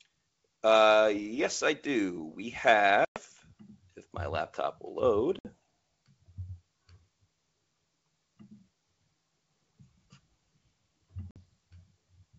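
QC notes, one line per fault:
3.05–3.20 s, 5.39–5.53 s (just after "if my laptop will") and 11.31–11.37 s, packet loss on an ADPCM call: abrupt silent holes of 110, 60 and 50 ms, then briefly distorted sound. The decoder's adaptive predictor and step size drift from the sender's and take tens of milliseconds to resynchronise on the G.722 link.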